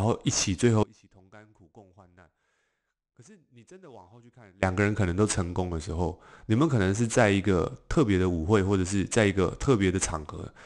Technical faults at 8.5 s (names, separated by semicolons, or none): none